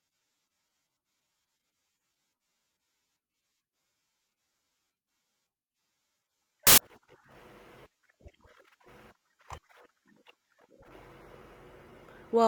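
At 6.67 s the reader briefly assembles samples from the wrong bytes, either shifted by one byte or taken in swapped order, so each value is built with its rapidly fluctuating low-order byte in the most significant position. For about 0.11 s, until 6.78 s, the speech is replaced by a loud, harsh burst of broadband noise.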